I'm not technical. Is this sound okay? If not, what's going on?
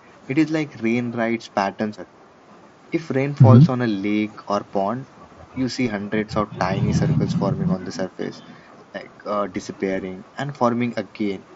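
Yes, nothing stood out when listening to this speech recording.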